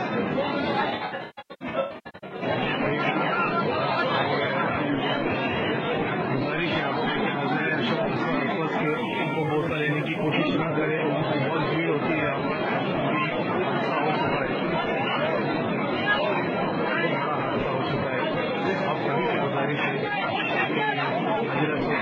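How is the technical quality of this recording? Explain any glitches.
There are three distinct glitches, two of them from a phone sitting too close to the gear.

From 0.90 to 2.43 s there's AAC frame loss with concealment: about 960 ms of audio dropped in bursts, the longest around 150 ms. The decoder patched the gaps from earlier spectra, so it sounds smeared and noisy.

From 8.87 to 10.32 s there's GSM phone buzz: a 2G phone on a call bursting at 217 Hz, rectified by the audio circuit. It comes through as a harsh, raspy buzz about 32 dB down.

From 10.39 to 11.23 s come GSM signalling bursts, a phone on a call with its user silent, so it sends only sparse burst groups. You get faint even ticks with a longer 217 Hz buzz twice a second.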